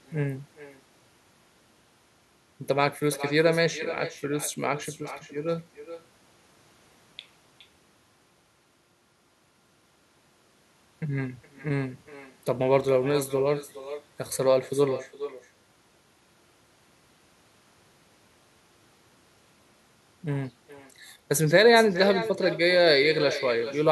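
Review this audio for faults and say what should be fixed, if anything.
The far end is playing the call through a loudspeaker, and its microphone picks that playback up with no echo canceller to remove it, so this is echo with no canceller, present for the whole clip. Every phrase of speech returns roughly 0.4 s later, after the trip through the network, as a quieter copy about 13 dB down that sounds thin and trails each phrase. Enabling acoustic echo cancellation on the far-end device, or having that side use a headset, would stop the loudspeaker output from being sent back.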